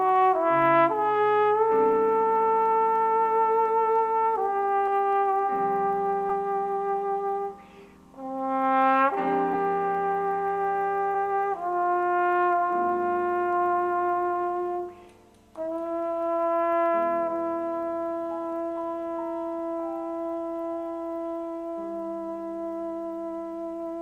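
Compressed frames skipped at 4.87, 6.29, 9.53 and 11.14 s: whole frames never reached playback, so the audio jumps ahead by a few tens of milliseconds each time, consistent with 10 ms frames.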